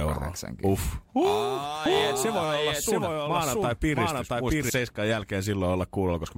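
From 1.86 s to 4.70 s the speech is heard twice, a doubled audio track: a full-band copy at about the same level trails by roughly 0.7 s. Without decay or room colour it starts and stops abruptly. The waveform and spectrogram show the same shapes repeated, shifted along the time axis. A second capture path or misaligned edit is the likely cause.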